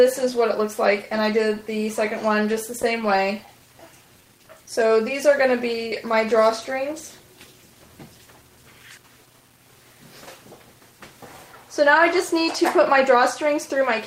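Right through the clip there's a gritty, grainy edge on the quieter sound, with error sitting around 35 dB under the signal. That likely comes from rounding to 8 bits without dither.

Between 2.43 and 3.62 s there are scattered short gaps, about ten lost packets, each patched by stretching the last sound, so you hear brief ticks and smears, none much over 15 ms.

From 3.77 to 4.88 s a jitter buffer slow-down repeats pitch periods to add 77 ms, so the audio drags at 94% speed without changing pitch.

Then at 7.20 to 7.55 s a jitter buffer speed-up trims out roughly 40 ms, pushing the sound to 110% speed, and it comes across as hurried.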